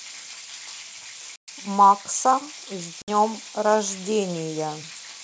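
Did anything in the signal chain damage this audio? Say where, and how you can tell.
Yes. In the network stage there was packet loss on an ADPCM call. Packets vanished at 1.36–1.49 s (about 120 ms, several packets) and 3.02–3.10 s (60 ms, a few packets), leaving hard-edged silent holes. The decoder's predictor and step size then lose sync with the sender's, so speech returns slightly distorted before it settles.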